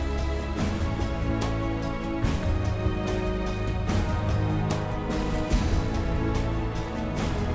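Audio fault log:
No faults heard in this clip.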